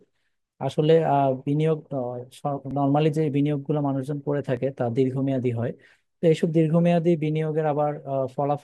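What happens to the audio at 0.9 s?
Nothing goes wrong at 0.9 s; the speech passes through that moment intact, with no dropout, click, distortion or other fault.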